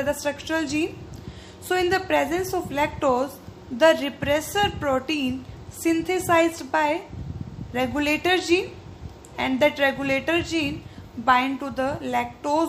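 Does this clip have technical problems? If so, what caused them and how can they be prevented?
No, nothing stood out as a technical problem on listening to this clip.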